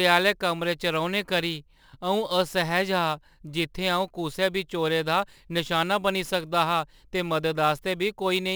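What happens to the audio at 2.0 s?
At 2.0 s, as throughout the clip, the converter's sample clock is wandering by a few microseconds, so each sample is captured slightly early or late at random. This is sample clock jitter. Because the timing error turns into an amplitude error wherever the waveform is changing fast, the speech carries a fine hiss and graininess, roughly 25 dB below the signal, that swells on loud and bright sounds and falls away in pauses.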